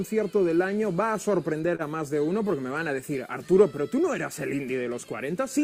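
At 1.75 to 1.82 s, a short stall from a late packet: the jitter buffer emptied, so about 37 ms of sound was stretched and held, with nothing lost.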